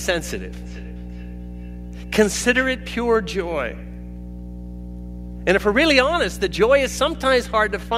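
A steady low tone sits under the speech from start to finish, pitched at 60 Hz and nearly as loud as the speech itself, so it muddies the whole clip. This is mains hum: the power line has leaked into the signal, most likely through a ground loop or a transformer close to the cabling, and because the coupling never changes, the tone stays constant in pitch and level throughout.

From 0.62 s to 2.8 s, faint copies of the speech trail behind it, each returning roughly 0.4 s after the original, reaching about 29 dB below the speech at their strongest. This is a feedback echo between two devices: two devices in the same room joined the same call, one played back what the other's microphone captured, and that microphone heard it again. Each device's echo canceller only removes its own playback, so the loop went uncorrected.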